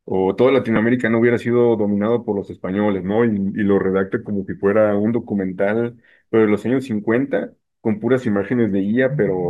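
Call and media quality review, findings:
Damaged data in a compressed stream at 0.76 s: brief glitch as the decoder loses frame sync and resyncs.

Speech slows by about 6% and drops roughly a semitone (about 108 cents) from 3.03 to 5.08 s and again from 8.23 to 8.74 s, then snaps back each time. Likely a drift correction step in clock-matching resampling. Speed and pitch move together in a single step, unlike gradual wow or flutter.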